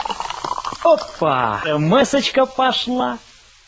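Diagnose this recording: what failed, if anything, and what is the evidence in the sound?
What failed is the jitter buffer stage of the call path. At 1.64 to 1.66 s there's a skip ahead: roughly 0.7 s of audio drops out and playback jumps straight to later sound with no gap. The buffer overflowed and threw away queued audio to catch up, on a G.722 path that tops out at 8 kHz.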